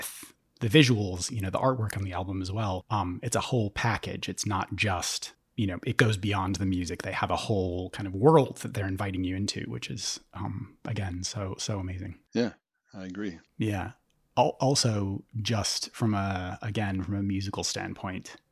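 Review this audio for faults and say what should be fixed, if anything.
No faults can be heard anywhere in this speech recording. Nothing needs to be fixed.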